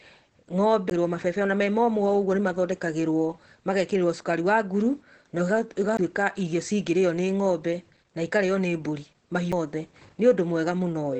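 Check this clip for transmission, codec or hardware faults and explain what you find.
Two faults are present: Opus voice compression across the whole clip, and three CD skips.

Opus voice compression runs from start to finish. The encoder is in its SILK linear-prediction mode, limited to wideband, and codes the excitation coarsely, which fits a low bitrate around 12 kbps. Nothing is left above 8.4 kHz, so the speech sounds muffled and dull. The coarse excitation adds a plainly audible hoarse, slightly robotic edge.

CD skips occur at 0.90 s, 5.97 s and 9.52 s. Each time, the laser loses its track and jumps to another turn of the disc's spiral. The player mutes very briefly, for a split second at the first two and even more briefly at the last, then carries on from a different point in the recording. This is heard as a tick followed by an abrupt jump in the speech.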